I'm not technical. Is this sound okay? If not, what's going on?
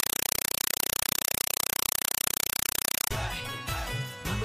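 No. From the start to about 3.11 s, you hear loud, chattering static instead of the real sound. This is a compressed stream played as audio. The signal sounds like a Dolby Digital stream sent through the connection and played directly as if it were normal sound, without being unpacked first. Each chunk arrives as a short 4 ms blast of noise followed by silence, 31 times a second. That rapid pattern makes the harsh chatter.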